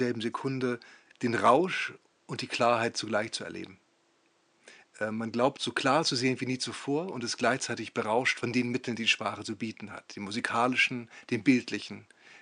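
There are no technical faults to describe in this speech clip.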